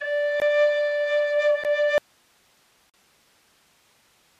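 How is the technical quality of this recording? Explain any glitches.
The technical quality is poor. The music has two short holes, then loses its signal for good about two seconds in, with a third hole after that.

There are blocks of digital silence at 0.40 s, 1.64 s, and from 2.90 to 2.94 s. The sound drops to silence there with no fade. The first two blocks last 17 ms and 12 ms; the 12 ms one is short enough to sound like a tick. The 12 ms one fits a 512-sample buffer that wasn't filled in time. The third block lasts 41 ms and sits inside the later dropout, so it cuts the remaining hiss to dead silence for a moment.

From 1.98 s to the end there's an audio dropout to a faint residue. The music cuts out abruptly, mid-flow, with no fade or natural pause. All that remains is hiss, sitting around 40 dB below the music's level. That points to the signal likely being lost upstream while the rest of the chain stayed live and kept passing its own noise.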